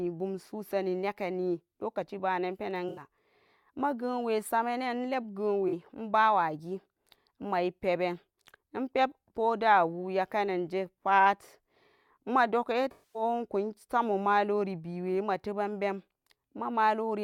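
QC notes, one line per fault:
2.89–3.01 s, 5.68–5.73 s and 12.91–13.22 s: AAC frame loss with concealment. Gaps of 85, 43 and 235 ms, consistent with about four, two and eleven lost frames, are patched from the last good spectrum, so the speech briefly turns smeared and noisy.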